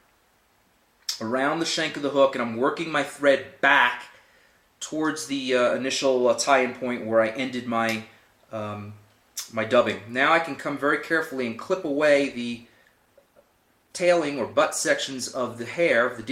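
At 11.85 s a call bitrate drop sets in and lasts to the end, with no recovery. The encoder was pushed to far fewer bits, which points to a fall from about 64 to 21 kbps, so coding turns coarse and the sound becomes rough, watery or muffled. A spectrogram shows blurrier, patchier detail from there on.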